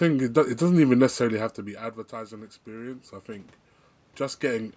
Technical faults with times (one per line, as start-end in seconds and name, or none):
2.09-3.56 automatic gain rising